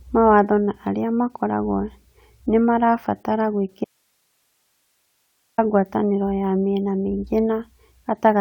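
From 3.84 to 5.58 s, after "nĩ marabatara", the speech cuts out abruptly for about 1.74 s, leaving only hiss roughly 50 dB below the signal, until "ngwatanĩro ya mĩena mĩingĩ" returns. This audio dropout to a faint residue likely comes from a lost feed into a still-live path.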